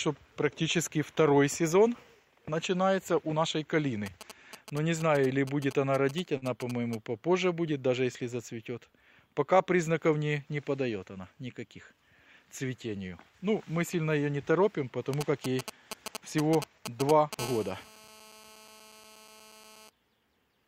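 From 4.06 to 6.95 s, GSM signalling bursts appear: a nearby 2G phone exchanging short bursts of control traffic, rectified by the audio circuitry into a galloping dit-dit-dit of brief buzzes at about 217 Hz, sitting well below the main signal.

Within that stretch, at 6.37 to 6.45 s, comes a short stall from a late packet. The jitter buffer emptied, so the receiver held the last sound for about 45 ms until the packet arrived. Nothing is lost, but that moment is audibly smeared and prolonged.

The signalling bursts return from 15.14 to 17.35 s, this time much stronger and close to the level of the wanted audio, so the galloping buzz pattern is prominent.

At 17.39 s the bursts give way to GSM phone buzz lasting until 19.89 s. The phone has moved into a call, transmitting continuously at 217 bursts per second. The rectified pulses become a steady, raspy, harmonic-rich 217 Hz buzz about 20 dB below the signal.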